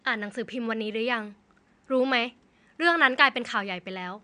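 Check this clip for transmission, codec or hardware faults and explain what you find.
No transmission, codec or hardware faults are present.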